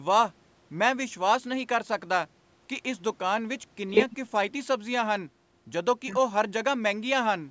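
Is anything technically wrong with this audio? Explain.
No, this speech has no technical fault: it bears the marks of normal call microphone processing, with the lowest bass taken out by its high-pass filter and no content above 8 kHz.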